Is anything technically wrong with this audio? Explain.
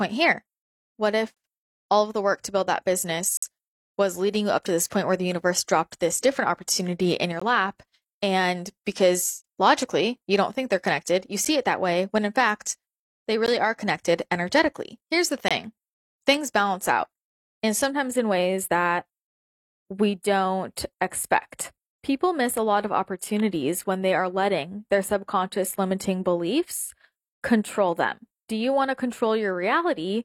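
Yes, there are two faults.

Gaps between stream segments occur at 1.34–1.37, 3.37–3.42, 5.43, 7.40, 9.42–9.44, 11.45, 13.46 and 15.48–15.51 s, roughly every 2 s. Segment timestamps leave holes that the player fills with silence, producing hard-edged dropouts of about 6 to 53 ms. No audio is lost.

Channel delay causes comb filtering from about 17.9 s to the end. One channel lags by roughly four samples, a fraction of a millisecond, and mono summing cancels shared content at evenly spaced frequencies starting near 7 kHz. The speech sounds hollow, with fixed notches.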